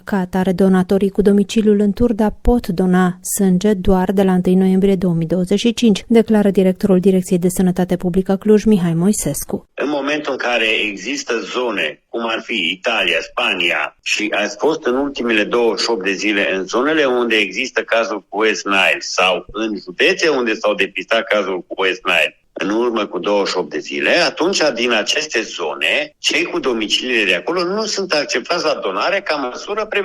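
At 8.74 s the quality drops suddenly. This is an adaptive stream at a lower bitrate. The connection slowed, so the player switched to a cheaper version of the stream. There is no gap at the switch. For six seconds codec artefacts rise. Nothing is left above 14.9 kHz. The sound fits a move from full-rate AAC to low-rate HE-AAC. Full quality returns at 14.74 s.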